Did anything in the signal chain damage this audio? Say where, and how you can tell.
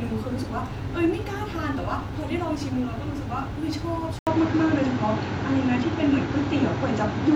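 Yes. At 4.19 s the speech cuts out for about 80 ms. From there to the end, everything above 7.6 kHz is gone and the sound turns duller and boxier. The level shifts by roughly 5 dB, and a new noise floor appears about 40 dB under the speech. This points to the input stage. The likely cause is an input switched to a poorer device, whose narrower band, tone and background noise replace the original microphone's.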